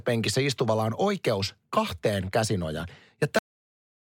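At 3.39 s a cut-off end stops the speech mid-sound in digital silence, with the final buffers never played. Unlike a dropout, the sound never returns.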